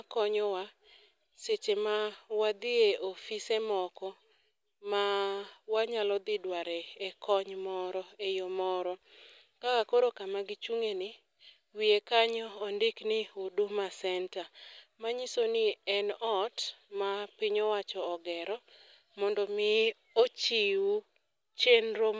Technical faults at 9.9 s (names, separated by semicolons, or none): none